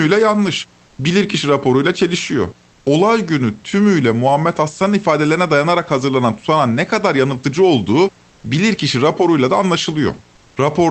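From 0.85 to 0.97 s, and again from 10.35 to 10.55 s, the room background in the pauses goes flat and featureless. The first patch is about 2 dB quieter. This is comfort noise in place of the background, likely from Opus discontinuous transmission.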